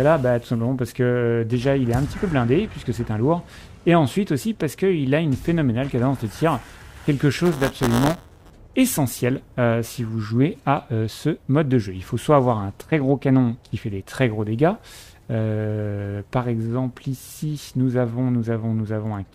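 From 7.44 to 8.50 s there's buffer tearing: a robotic 172 Hz buzz, fitting a 256-sample buffer, where a small slice of each buffer replays audio about 10 ms stale.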